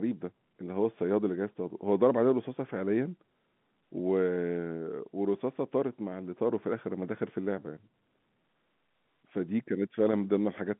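No technical faults are audible.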